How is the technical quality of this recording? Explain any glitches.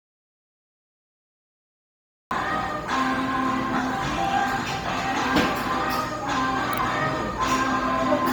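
The recording has two clear problems: the opening is dead silent, and the whole clip carries heavy codec damage.

An audio dropout to silence is already under way when the clip begins and lasts until 2.31 s. For those first seconds there is nothing at all, not even room tone, and the sound then arrives abruptly. The input was most likely lost, for example through a dropped link or a mute, while the recorder kept writing silence. On a waveform this shows as a flat line, and on a spectrogram as a fully black block.

Bluetooth LC3 compression colours everything after the gap. The upper spectrum sounds thin and noisy, giving the sound a grainy, breathy edge. The damage is heavy and is likely from LC3 encoding at a low bitrate, consistent with roughly 32 kbps and 10 ms frames. The encoder discards much of the high-frequency content and fills it with shaped noise. A spectrogram would show a speckled, mottled upper band in place of clean harmonic detail, with nothing above 20.2 kHz.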